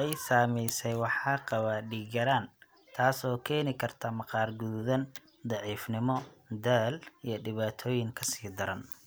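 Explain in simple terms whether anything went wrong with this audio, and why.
Nothing went wrong here; the speech sounds as it should.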